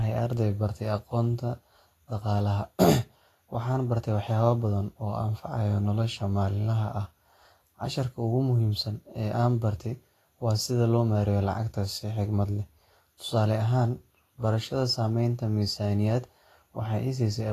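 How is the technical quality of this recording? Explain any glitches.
The technical quality is compromised by audible compression damage across the whole speech recording. The likely cause is Vorbis compression at a low bitrate, consistent with roughly 34 kbps. Its spectral floor carries the shape, but the treble is quantised so coarsely that fine detail turns into noise. The result is a hissy, grainy top end, roughened voicing and softened consonant attacks.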